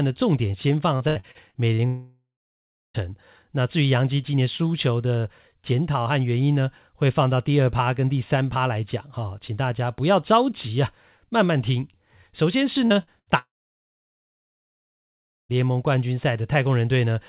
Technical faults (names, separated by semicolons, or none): repeated packet loss (robotic sound); long network dropout; short concealed packet loss; burst of packet loss